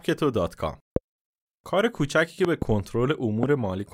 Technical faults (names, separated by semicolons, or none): loud pop